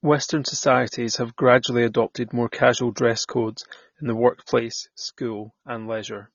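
Speech, carried throughout with plainly audible AAC compression artefacts: the band stops at about 6.9 kHz, and the remaining spectrum sounds thin and smeared, with a watery, warbling texture on sibilants and sustained vowels. That degree of damage fits a low-bitrate AAC-LC encode, roughly 24 kbps, where the encoder likely discarded the upper band and coarsely quantised what was left to stay within its bit budget. At 4.59 s a sudden gain jump drops the level by about 7 dB, and it stays down to the end of the clip. Speech and background noise fall together at the same instant, with no fade or ramp, so the change happens between one sample and the next. That points to a digital gain setting being applied instantly rather than smoothed, likely a level change or bit shift in the processing chain.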